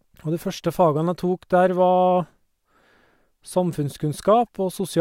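No technical faults can be heard anywhere in the speech. Nothing in the signal path draws attention to itself at any point in the recording.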